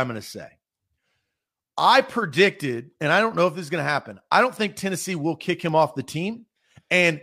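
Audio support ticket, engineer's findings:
Word clock ticks, 0.44–6.73 s, starting after "going to": sharp, uneven clicks about every half second, around fifteen. Thin vertical broadband lines on the spectrogram. Unlocked digital receiver clock, roughly 40 ppm drift, one sample slipped each time.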